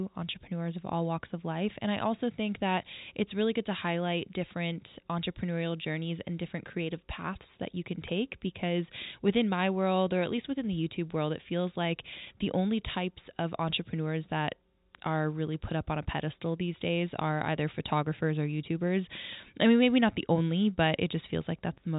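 Speech recording; no technical faults are present.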